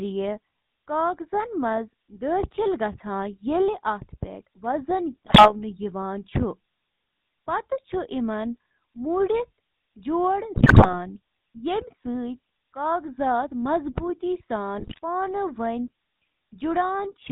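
The whole clip is coded with the GSM full-rate codec, and the damage is plainly audible. Nothing above 4 kHz survives, and the coarse pulse excitation leaves a steady buzzy, gravelly roughness consistent with the 13 kbps full-rate coder. Unlike transmission errors, this coloration never lets up.

GSM bit errors break in from 5.26 to 5.55 s, 10.54 to 10.95 s and 14.78 to 14.99 s. Corrupted filter, pitch and gain values warp the spectrum and spike the level, producing squawks, pops and gargling rather than the clean silences a dropped packet would leave.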